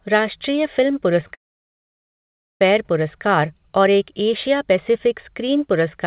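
Just after "राष्ट्रीय फिल्म", short concealed packet loss occurs at 1.21 s and again from 1.27 to 1.31 s. A few hundredths of a second failed to arrive. The receiver extended the preceding sound and blended back in. Each gap is a brief smear or wobble.

A long network dropout follows from 1.34 to 2.61 s. The continued sound fades fast, leaving about 1.2 s of silence. Speech resumes at "पुरस्कार और एक" with the middle lost, likely from a network outage. The telephone-band codec passes nothing above 4 kHz.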